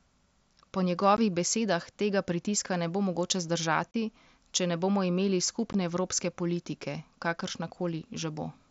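Three brief dropouts cut the speech with hard edges: a gap of about 15 ms at 1.17 s just before "besedah tega pritiska ne", a longer 30 ms hole from 3.92 to 3.94 s right after "pritiska ne bo mogoče", and another 15 ms gap at 5.73 s leading into "evropske politike". These are unconcealed Bluetooth headset packet loss. Voice packets between headset and phone never arrived, and nothing was patched in, so silence or an idle pattern sits abruptly where the audio should be. The doubled length of the middle gap suggests twice as many missing packets. Around the holes, the wideband mSBC link carries the speech up to 8 kHz with its light graininess.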